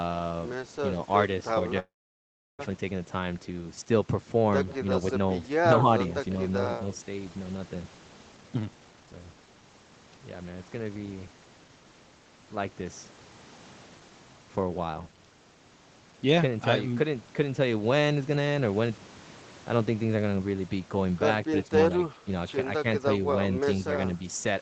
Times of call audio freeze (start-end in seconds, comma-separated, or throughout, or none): 1.79-2.61